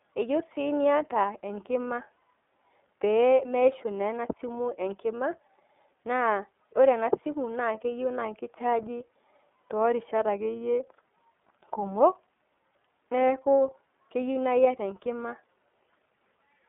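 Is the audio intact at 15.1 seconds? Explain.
No. At 15.1 s, as throughout, the iLBC codec coding each frame independently leaves audible roughness and a synthetic edge on the speech, with nothing above 3.7 kHz.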